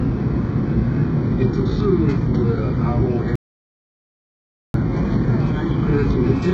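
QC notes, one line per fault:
Throughout: HE-AAC compression. The sound has a hard ceiling at 7.8 kHz, with nothing above it, and the upper band carries a synthetic, grainy sheen rather than true detail. This is likely heavy low-bitrate HE-AAC coding, in the range of 8 kbps. The codec spends its few bits on the lower spectrum, then fabricates the treble by copying lower bands upward under a coarse envelope. The rebuilt top no longer tracks the real harmonics, so bright transients sound gritty and metallic.
3.36 to 4.74 s: audio dropout to silence. The sound stops abruptly and returns about 1.39 s later. The gap is silent, with no background or room tone underneath, and whatever occurred during that stretch is simply absent. The likely cause is a momentary loss of the input signal, such as a link or device interruption or a brief mute. During that loss the recording chain kept writing silence instead of pausing, which produces the dead, hard-edged hole.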